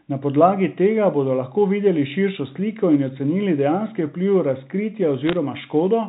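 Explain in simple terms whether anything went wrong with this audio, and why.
Bit errors on a digital phone line show up from 5.27 to 5.33 s as a short burst of sharp ticks and crackle laid over the speech. The call travels as G.711 telephone coding, where every sound sample is stored as a small string of ones and zeros. Here a small fraction of those bits got flipped in transit. Each flipped bit spoils a single sample, and when it hits an important bit, that sample jumps abruptly and you hear a click.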